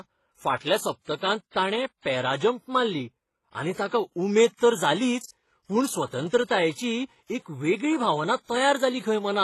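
Throughout the speech, nothing sounds above about 12.3 kHz, and two kinds of codec artefact are heard at once: swirly, metallic smearing plus a thin, synthetic-sounding upper band. That layering sets it apart from a single low-bitrate codec. It is likely transcoding between lossy codecs, pointing to a WMA encode followed by a low-rate HE-AAC one.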